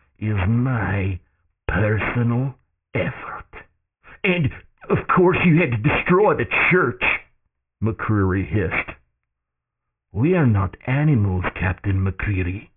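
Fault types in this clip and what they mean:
aliasing: The speech sounds as though its sample rate was cut to what points to about 6 kHz with no low-pass filter first. Energy above the 3 kHz fold point therefore mirrors back down into the band as harsh, unrelated tones, roughly 10 dB below the speech, so sibilants turn gritty and metallic throughout. On a spectrogram, the energy runs hard up to 3 kHz and shows mirrored, inverted formant tracks.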